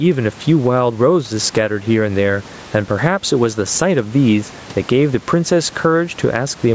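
Gain pumping runs through the whole clip. The gain swings by around 10 dB. The likely cause is input gain set far too high, with a fast limiter pulling it back down.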